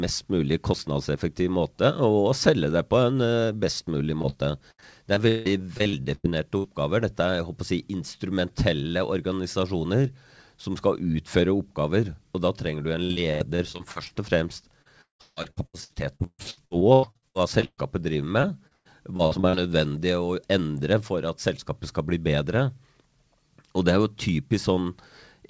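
Speech carried over a wideband call path, with nothing above 8 kHz, which fits G.722 at 64 kbps. It shows two kinds of packet-loss damage. Right after "best mulig", short concealed packet loss hits twice in overlapping spots, 4.22–4.37 s and 4.30–4.34 s. A few tens of milliseconds never arrived, and the decoder bridged each hole by extending the preceding sound before blending back in. This is heard as a brief smear or wobble. On a spectrogram the harmonics stretch flat for a moment, and the waveform shows a short stretch of copied periods with a slightly uneven join. Repeated packet loss with a robotic sound follows in four stretches: 4.71–6.66 s (11 gaps, longest 173 ms), 13.04–14.12 s (8 gaps, longest 80 ms), 14.82–17.80 s (22 gaps, longest 178 ms, nearly half the span concealed) and 18.42–19.55 s (7 gaps, longest 121 ms). Because holes keep arriving before the stream recovers, the patches pile up into choppy speech with pieces missing. 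On a spectrogram these stretches look like a ladder of frozen, blurred harmonic segments with abrupt edges. In the waveform they appear as repetitive, periodic chunks that fade and restart.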